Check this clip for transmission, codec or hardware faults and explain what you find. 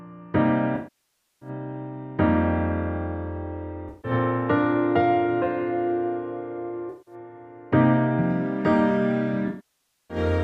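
AAC frame loss with concealment occurs four times: 0.75–1.49 s, 3.89–4.11 s, 6.89–7.14 s and 9.48–10.17 s. The decoder rebuilds missing frames from the last good spectrum, so the 0.15–0.17 s gaps sound smeared and phasey, while the 0.6–0.7 s losses fade toward silence and back, never cutting abruptly to digital silence like a plain dropout.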